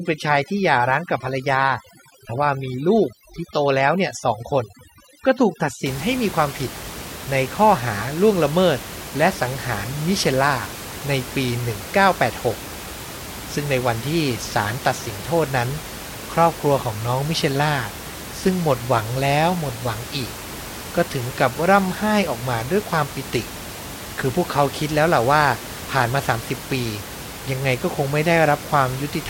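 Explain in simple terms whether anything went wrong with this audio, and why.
Overdone noise removal affects the first 5.9 seconds. A noise-cleaning tool was set too strong. It switched off any sound close to the background noise, including soft parts of the voice. The background drops and breaks up into twinkles.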